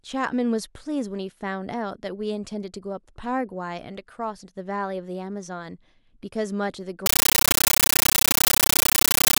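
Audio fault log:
7.06–9.39 s, compressed stream played as audio: speech gives way to loud chattering static, 13.3 ms noise bursts and silence repeating 31 times per second, unlike steady noise, which fits undecoded AC-3.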